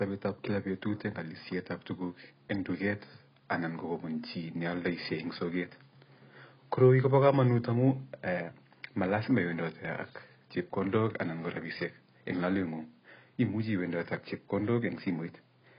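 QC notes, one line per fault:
Throughout, AAC compression: nothing above 5.1 kHz, smeared warbling speech, likely AAC-LC at a bitrate fitting about 16 kbps, narrowing bandwidth and coarsely quantising the rest.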